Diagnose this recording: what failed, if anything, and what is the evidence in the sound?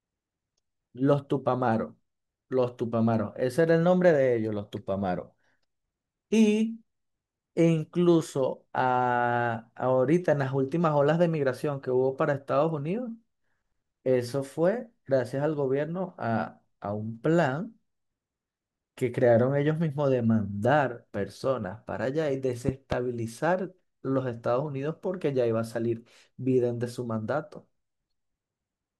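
A loud pop, in fact a pair of them, lands between 22.69 and 22.94 s, rising to roughly 15 dB above the speech. The speech carries on underneath without a gap or stutter, so this is not a dropout or buffer glitch. It is a voltage transient added on top, likely from the analogue wiring side, such as a plug, switch or static discharge. The following circuitry shaped each pulse.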